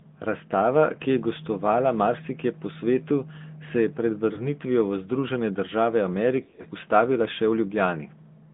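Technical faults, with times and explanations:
throughout: AMR narrowband mobile codec. The speech is confined to roughly 150 Hz to 3.6 kHz, so it sounds thin and boxy, with no air or sibilance above the cut-off. The codec rebuilds each 20 ms frame from a vocal-tract filter excited by a few pulses. At this rate, which fits the 10.2 kbps mode, the loss is plainly audible: vowels take on a buzzy, synthetic edge.
4.34–4.47 s: lost AMR speech frames. Right after "svetu se je pred" there is a brief dip, which fits a single lost 20 ms frame. The decoder fills the gap by repeating the previous pitch and filter settings at reduced gain. The repair and the gain recovery spread the disturbance over about 130 ms.
6.44–6.66 s: lost AMR speech frames. Just before "ustavila še" the sound dips and warbles in several short patches over about 200 ms, which fits around six lost frames in runs of up to 40 ms. 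Each run is bridged by repeating the last good frame at falling gain. Because the runs are short, the sound never fully mutes, but it turns rough and uneven until clean frames return.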